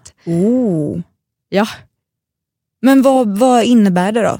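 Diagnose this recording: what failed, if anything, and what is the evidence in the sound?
No fault is audible.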